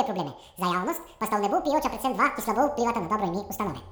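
From start to finish the speech rushes past at twice its proper rate and sits a full octave, 12 semitones, too high, with a thin, chipmunk quality. This is audio read two samples at a time (double speed): the reader treated each pair of samples as a single frame, as if the stream were two channels or twice as wide, so everything plays at 2x and any strong content above a quarter of the sample rate folds back.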